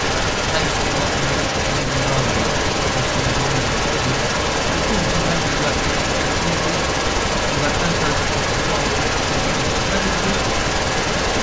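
From 0.0 s right through to the end at 11.4 s, the voice comes back as a second copy about 0.34 s later, and that copy is about 5 dB louder than the original. It's an echo leak, likely from the far end playing the call on a loudspeaker, with its echo canceller letting the pickup slip through and sending it back. The band-limiting up to 8 kHz from the call's microphone processing is normal.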